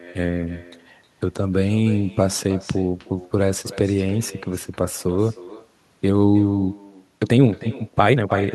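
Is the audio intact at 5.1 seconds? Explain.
No, echo with no canceller runs throughout, including 5.1 s: the far end's loudspeaker feeds its microphone, returning the speech about a third of a second later, roughly 19 dB quieter and thinner.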